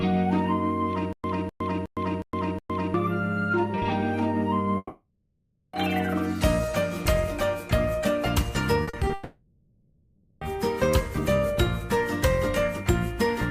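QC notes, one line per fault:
1.13–2.94 s, stutter with silent gaps: a 0.25 s fragment plays, then about 0.11 s of digital silence follows, and the pair repeats every 0.36 s, five times in all. This is likely a stalled player or stream that replays its last buffered piece at each retry and then runs dry, so the audio meant for that stretch never arrives. On a waveform it shows as identical blocks separated by flat silent lines. On a spectrogram it shows as copies of the same pattern with blank vertical stripes between them.
4.77–5.75 s and 9.13–10.43 s, long network dropout: the first span loses about 0.96 s of audio and the second about 1.28 s. In each case the receiver stretches the last sound into a buzz or hiss that decays. The first ends in about 30 ms of true silence, and the second has no silent tail before the audio resumes further on. The likely cause is a long network outage. A spectrogram shows smeared, repetitive harmonics fading out, then an abrupt jump where the audio resumes. 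The waveform envelope tapers, then resumes abruptly.
8.83–9.11 s, repeated packet loss (robotic sound): four short holes, none longer than 40 ms, totalling 0.12 s, are each patched by continuing the preceding sound. That patching covers about 43% of this brief span, which gives a choppy texture just before the second dropout begins. A spectrogram shows short, repeated bands with frozen harmonics breaking up the normal detail. The waveform has small repeated cycles spliced in at closely spaced points.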